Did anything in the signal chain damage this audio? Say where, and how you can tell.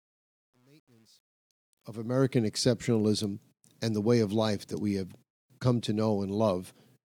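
Yes. Truncation distortion on the fade-in, from a gain or sample-format stage. From 0.0 to 2.38 s the rising level sounds gritty, worst up to 1.8 s. The fade was computed without dither, which fits about 10-bit resolution.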